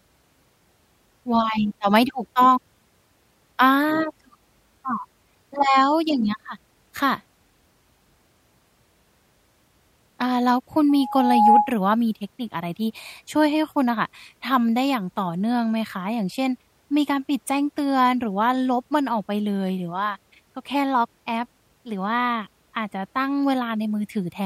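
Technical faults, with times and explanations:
10.89–11.73 s, loudspeaker feedback squeal: the microphone is picking up its own loudspeaker, and around 832 Hz the loop gain passes one, so that tone feeds on itself, swelling over about half a second into a steady squeal roughly 10 dB above the speech until the loop breaks.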